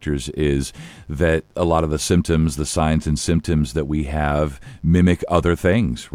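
Mains buzz runs through the whole speech clip, built on a 50 Hz mains supply. Sharp switching spikes from a dimmer, rectifier or unshielded lead leak in twice per cycle, spraying harmonics into the kilohertz range: a steady, raspy buzz about 40 dB beneath the speech.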